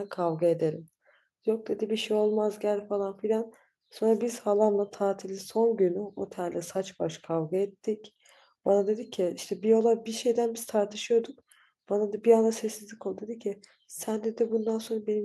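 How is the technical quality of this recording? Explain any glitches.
No glitches can be heard anywhere in the recording, and the signal holds steady and continuous from beginning to end.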